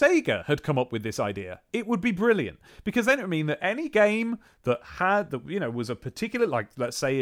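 Speech recording with no audible technical faults at any point.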